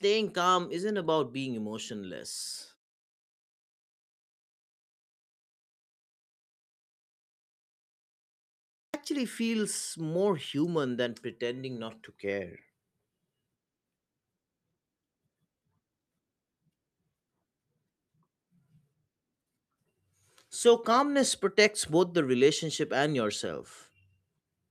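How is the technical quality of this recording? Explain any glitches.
The recording has one clear glitch, a clipped start after a pause, at 8.55 s. The sound resumes after a silence of about 5.9 s, and its first 0.39 s is swallowed, up to 8.94 s. The output device likely dropped into a sleep state during the long pause and needed time to wake. The speech therefore begins abruptly, missing its opening sounds.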